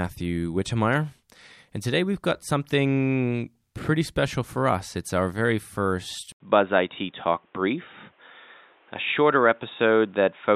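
Input switched to a poorer device, from 6.32 s to the end: after a brief gap of about 80 ms, the speech turns dull and boxy, with nothing left above 3.8 kHz. The loudness stays about the same, but a faint new background noise appears, roughly 40 dB below the speech. The likely cause is the system changing its input mid-recording to a narrower-band microphone or a headset's call profile, which has its own tone and noise.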